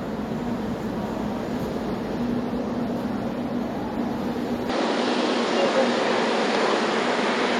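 At 4.69 s the sound abruptly changes character and stays that way to the end: everything above 10 kHz disappears, so it turns duller and a bit boxy. The level shifts by about 5 dB, and a new background noise appears, sitting roughly 30 dB under the signal. There's no gap at the changeover. That combination points to an input switched to a poorer device, likely a second mic or a headset profile taking over mid-recording.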